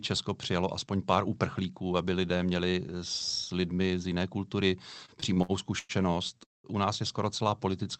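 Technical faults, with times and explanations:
5.05–5.92 s, repeated stalls (stutter): just after "lidmi z jiné kultury" the speech catches five times, each time briefly holding its last sound for up to 102 ms, about 0.24 s in all. Packets arrived late, so the jitter buffer kept emptying and the receiver stretched what it had.
6.44–6.67 s, call audio freeze: the speech halts on a short held buzz or hiss that dies to silence for about 0.18 s, then carries on from where it stopped, with nothing lost. Packets were likely held up, draining the jitter buffer and adding about 0.2 s of delay.
7.44–7.85 s, jitter buffer slow-down: after "nás je skoro" the speech drags to about 89% speed at unchanged pitch, sounds drawn out by about 55 ms in total. Running low or raising its target delay, the buffer repeated single pitch periods to rebuild its reserve.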